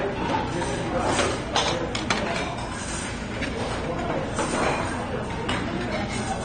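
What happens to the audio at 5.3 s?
At 5.3 s the sound is dull and smeared, as it is throughout. Nothing is heard above 9 kHz. Sustained parts warble and fizz. The likely cause is AAC compression at a low bitrate, near 32 kbps, which quantises coarsely and cuts the top band.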